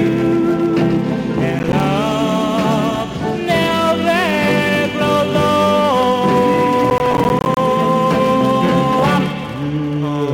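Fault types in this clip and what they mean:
Processor overload crackle: the processor falls behind and misses a run of buffer deadlines, and each missed buffer comes out as a short hard-edged silence. Two bursts of gritty crackle ride on the sound, from 1.59 to 1.8 s and from 6.9 to 7.57 s, the second longer and denser. The gaps are roughly 10 ms each, a handful in the first burst and about twenty in the second. On a waveform they show as abrupt dropouts to silence; a spectrogram shows thin vertical broadband lines at each edge.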